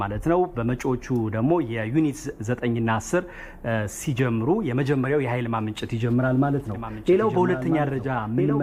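From 6.74 s to the end, the audio is doubled. A second full-band copy of the same sound runs underneath, trailing by about one and a half seconds. It sits roughly 10 dB below the original. The copy cuts in abruptly and carries no decay or room colour. It sounds like a clean, quieter repeat chasing the main track. The likely cause is a second capture through a slower path, or an edit that holds two copies out of step.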